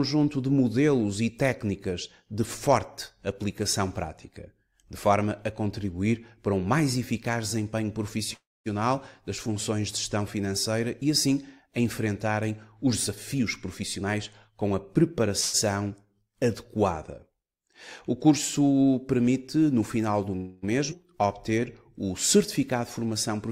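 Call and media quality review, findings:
Call audio freeze, 8.33–8.68 s. Sound stalls, a short decaying tail, then about 240 ms of silence. Likely a jitter buffer underrun from held-up packets. Playback resumes where it stopped. Nothing lost, about 0.32 s of delay added.

Call audio freeze, 15.40–15.56 s. Brief hold, about 140 ms filled with a fading continuation, no silent stretch. Likely the same underrun mechanism. Audio continues intact, delay grows.

Call audio freeze, 20.37–20.65 s. About 260 ms stretched tail, no dropout to silence. Jitter buffer likely starved again. No content missing.

Jitter buffer speed-up, 12.86–15.31 s. Audio hurried, pitch unchanged, running at 112% speed. Buffer over target. Receiver trims pitch-period-sized slices repeatedly, roughly 0.3 s removed in total to cut latency.

Skip ahead, 20.90–20.93 s. Sudden forward jump with almost no gap, about a fifth of a second of audio gone. 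Buffer overflow or in-transit loss with later audio already queued. The two sides are spliced nearly directly, and latency drops.

Jitter buffer slow-down, 21.16–21.61 s. Sound drawn out, same pitch, at 91% speed. Buffer running low or target delay just raised. Receiver repeats single pitch periods to rebuild reserve, about 49 ms added.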